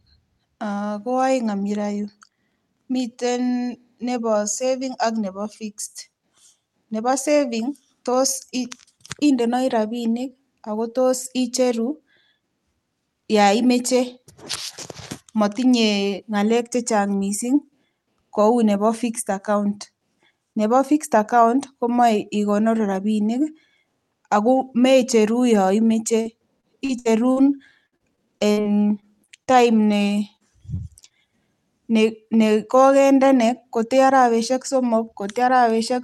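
Repeated packet loss (robotic sound) hits from 26.21 to 27.38 s and again from 27.86 to 29.92 s. Packets kept failing to arrive, with five gaps and then nine, each up to about 60 ms. The receiver patched every hole by extending the last sound, so the audio turns choppy, with pieces missing.

Short concealed packet loss follows at 30.36 to 30.42 s (about 40 ms), 30.76 to 30.80 s and 31.08 to 31.12 s. Each time the decoder briefly carried the preceding sound forward and then blended back into the real signal, leaving a quick smear or wobble.

Lost packets rebuilt from error correction fall at 30.68 to 30.70 s, 30.78 to 30.80 s and 30.82 to 30.84 s, each 20 ms. The following packet held a coarse backup copy, so there is no gap, only a rougher, noisier fragment. The Opus call path, which fits about 48 kbps and cuts off near 12 kHz, leaves nothing above that to lose.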